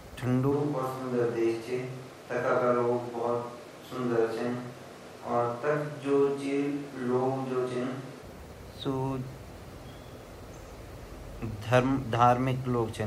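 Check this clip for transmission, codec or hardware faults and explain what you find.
One fault is present. From 0.53 s to 8.21 s the speech switches to a distant microphone, likely because the close mic's feed dropped out. The voice turns hollow and roomy with thinner bass, while loudness stays about the same. A spectrogram shows weakened low end, smeared reverberant tails and a room-noise floor roughly 25 dB below the speech, with abrupt edges at both changeovers.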